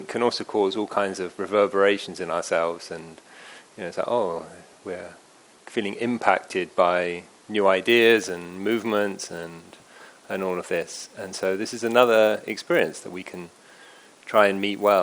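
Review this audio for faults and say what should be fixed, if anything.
From 7.87 s to the end, a 100 Hz buzz tracks the signal. The resampler restarted on every 10 ms block, leaving an error at each edge. Carry the resampler's filter state across blocks instead of resetting it.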